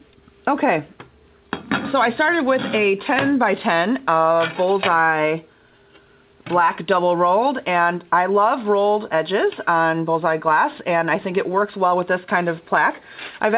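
The audio carries no technical faults, having passed through a telephone-grade call path whose narrowband coding, consistent with G.711 A-law, leaves nothing above 4 kHz.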